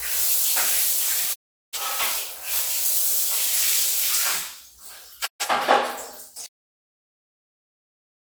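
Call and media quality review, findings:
Digital broadcast dropout at 1.32 s and 5.25 s. Receiver muting after frame loss, 20 ms fade into silence, about 384 ms and 128 ms lost, fitting several corrupted frames each.

Cut-off end at 6.46 s. Sound stops mid-event into digital silence with no decay, as the final buffers were never written or played out.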